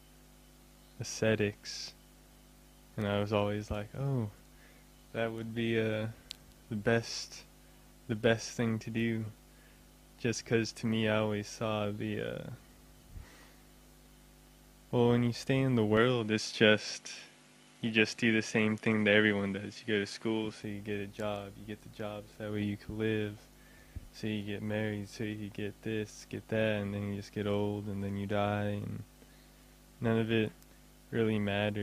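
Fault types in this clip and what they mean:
Input switched to a poorer device: from 15.97 to 20.63 s the top end vanishes above 11.7 kHz and a faint new noise floor appears, likely a different microphone, unlike simple filtering.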